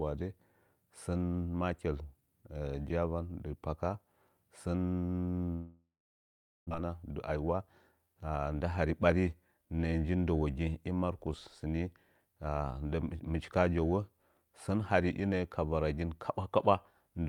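At 5.53 s the speech gives way to a buzzy continuation of the last sound that fades, leaving about 0.77 s of silence until 6.73 s. This is likely a long network dropout: roughly a second of audio never arrived. The waveform shows a decaying tail and a flat gap; the spectrogram shows smeared harmonics fading to blank.

From 6.80 to 8.00 s a jitter buffer speed-up plays the speech at 110% speed at the same pitch, cutting roughly 150 ms of built-up delay by removing short pitch-period slices. It sounds hurried. The spectrogram shows syllables squeezed closer together with unchanged harmonic spacing.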